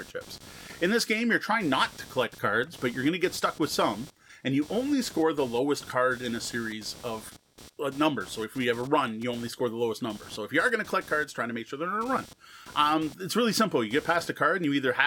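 Speech with computer activity noise throughout: a buzzy chirp pulsing near 200 Hz, about 25 dB down, tracking computer load on the shared audio ground rather than the speech.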